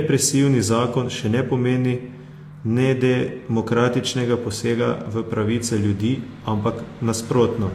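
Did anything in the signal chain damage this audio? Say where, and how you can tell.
Yes, at the codec stage, across the whole speech clip. You hear two layers of compression damage: smeared, swirly artefacts plus a second, different grittiness on top. That's likely transcoding between lossy codecs, something like Vorbis then HE-AAC at 48 kbit/s, each encoder spending bits on the last one's mess.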